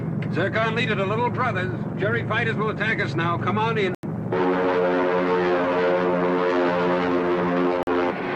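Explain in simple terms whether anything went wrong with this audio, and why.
Two digital broadcast dropouts: the sound cuts to silence at 3.95 to 4.07 s and again at 7.83 to 7.91 s. The receiver lost good data and muted until it recovered, which fits two frames lost, then one. That audio is gone.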